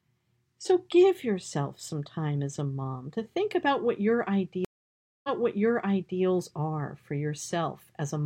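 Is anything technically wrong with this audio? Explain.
Yes. From 4.65 s to 6.21 s there is a stream reconnect. The connection broke and the player fell silent for 0.59 s, then reconnected and started a new decoder mid-stream. The server resent a burst, so the speech resumes about 0.98 s earlier and part of it is heard twice. Unlike a plain dropout, which loses material, this gap is followed by repeated speech, and the restart comes in muted or faded rather than cutting straight back.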